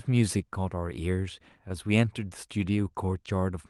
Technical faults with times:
0.00-3.69 clock drift between sender and receiver
0.38-3.41 repeated timing corrections

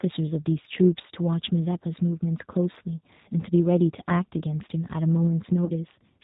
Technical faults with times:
0.00-6.23 G.729 codec
5.65-5.72 VoIP packet loss concealed by the speech codec

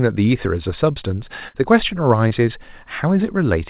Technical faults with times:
1.48-1.56 burst of packet loss
2.28-2.32 short concealed packet loss

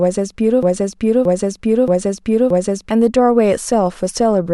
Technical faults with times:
0.63-2.91 broken-record loop

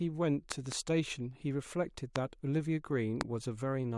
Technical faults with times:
0.52-0.74 loud pop
2.16-2.18 loud pop
3.21-3.23 loud pop

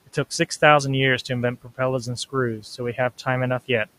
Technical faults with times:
1.62-1.79 speech cut by the noise suppressor

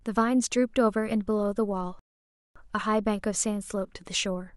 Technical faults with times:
1.99-2.56 rebuffering stall

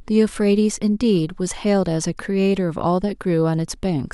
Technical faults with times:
none

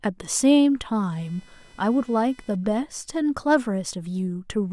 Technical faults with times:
1.12-3.12 computer activity noise

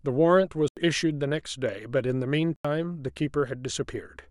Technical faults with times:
0.68-0.77 block of digital silence
2.56-2.65 block of digital silence

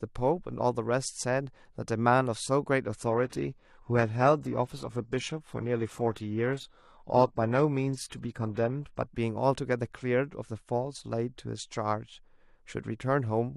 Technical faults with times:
3.06-9.06 adaptive stream at a lower bitrate

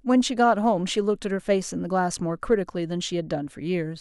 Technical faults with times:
none

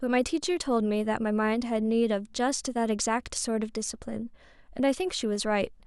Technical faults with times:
1.38-5.36 periodic USB or driver dropouts

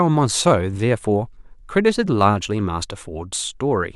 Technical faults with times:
none

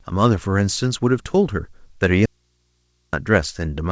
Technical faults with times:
2.26-3.13 audio dropout to a faint residue

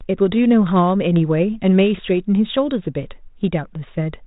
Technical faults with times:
none

